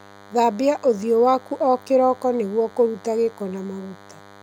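DECT cordless phone buzz runs through the whole speech clip: a nearby DECT handset or base transmits a radio burst every 10 ms, which the audio circuitry rectifies into a thin, steady 100 Hz buzz rich in harmonics, sitting well below the speech, roughly 25 dB down.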